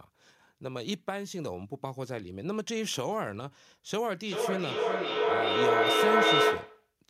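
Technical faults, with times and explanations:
4.22–6.95 s, feedback echo between two devices: the speech returns at intervals of roughly 400 ms, each pass thinner and more ringing, and the repeats build to about 9 dB above the speech instead of decaying, because a second device replays the sound into a microphone whose echo canceller cannot remove it.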